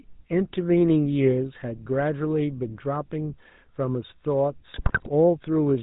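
The whole clip passes through the GSM full-rate codec, which fits a 13 kbit/s stream. The codec rebuilds speech from a vocal-tract filter driven by a sparse train of regular excitation pulses and discards everything above 4 kHz. The result is plainly audible: the speech sounds dull and band-limited, with a buzzy, gravelly roughness laid over it from start to finish.

From 4.74 to 5.09 s, GSM bit errors corrupt the decoder's input, which fits an error rate of roughly 5% across a run of frames. Flipped bits in the filter, pitch and gain parameters make each damaged frame decode with a distorted spectrum or a wrong level. For about a third of a second the speech breaks into squawks, pops and gargling bursts before the clip ends.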